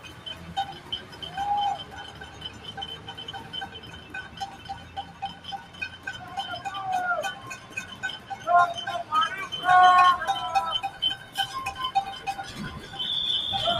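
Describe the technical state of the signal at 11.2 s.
At 11.2 s the signal sits inside a brief dip from 11.18 to 11.35 s. It is a sound cut by the noise suppressor. The suppressor judged this passage to be noise and pulled it down harder than its surroundings. The deepest drop is about 6 dB. Sustained and fading parts lose the most. Their level sags and their decay ends early. Any sharp onset survives better. The effect lasts roughly 150 ms.

That dip happens against a constant background problem. A noise suppressor built for speech is applied to these sounds for the whole clip. It treats steady tones, ambience and reverberant tails as unwanted noise. It keeps reducing them, with gain moving over a range of around 15 dB. Attacks mostly pass through intact, but held material sinks. The result is that the sound pumps, flutters or thins out. Tails thin out.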